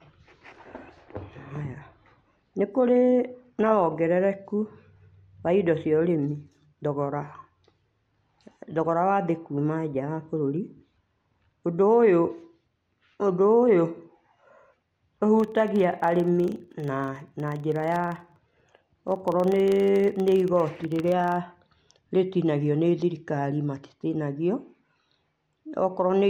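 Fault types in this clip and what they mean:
Filter restarted on every block: From 15.4 to 21.43 s the filter drops its state at every block boundary and restarts from silence, producing a 25 Hz buzz that follows the speech level. Spectrograms show thin vertical stripes every 40 ms; waveforms, small spikes at each boundary.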